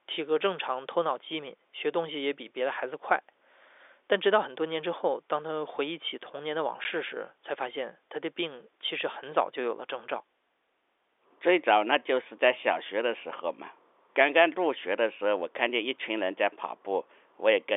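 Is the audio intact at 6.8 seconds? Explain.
No. Packet loss filled with silence strikes at 6.84 s. A 10 ms piece of the speech never arrives, and the receiver plays digital silence in its place, which fits a single lost packet. The result is a brief hole in the speech with hard edges.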